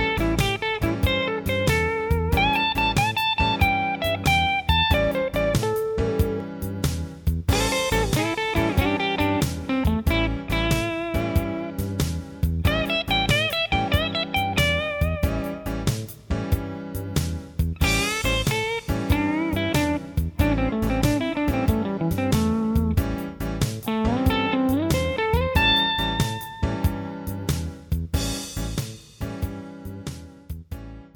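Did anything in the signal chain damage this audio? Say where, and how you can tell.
No, nothing in the signal chain damaged this audio.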